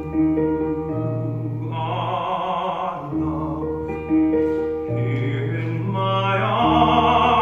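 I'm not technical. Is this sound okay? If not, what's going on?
Yes, the sound is fine: nothing in it points to a technical problem with how it was recorded or played back.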